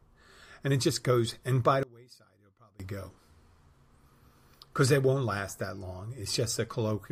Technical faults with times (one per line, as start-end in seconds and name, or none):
1.83-2.80 one channel inverted